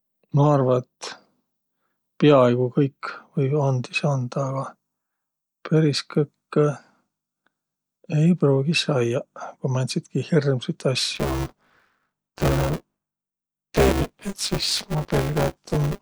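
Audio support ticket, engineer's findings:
Buffer tearing, 11.15 s to end, after "määntsitki hirmsit". Robotic 200 Hz buzz. Ring-buffer writer and reader crossed. About half of each period replays audio around 20 ms old.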